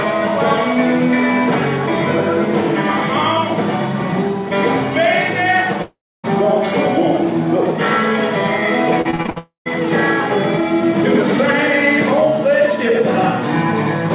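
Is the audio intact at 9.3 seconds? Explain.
No. At 9.3 seconds the sound is inside a stretch of repeated packet loss (robotic sound) running from 9.02 to 9.38 s. Six short holes, the longest about 61 ms, are each patched by stretching the preceding sound, so roughly half of the span is filled-in material rather than real audio. The result is choppy, with pieces missing. On a spectrogram the harmonics freeze into flat, smeared bands between brief real fragments. On the waveform the pieces repeat in short, regular-looking segments.

Straight after, at 9.38 s, a long network dropout begins and lasts until 9.68 s, most likely from audio that stopped arriving altogether. The last sound is carried on as a fading buzz or hiss, then about 130 ms of near-silence follows before the audio resumes with the lost part gone. This shows on the waveform as a decaying tail into a flat line, and on the spectrogram as a smeared fade into an empty gap.

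Throughout, including at this moment, a doubled audio track is present. A second full-band copy about 5 dB quieter trails the original by roughly a tenth of a second, likely from the audio being captured twice on paths of different speed. It sounds like a dry, slapback-style echo with no room decay. On the spectrogram every event appears twice, the fainter copy offset in time. The waveform shows matching shapes displaced by that fixed delay. The sound is band-limited by the G.711 call codec, with nothing above 4 kHz.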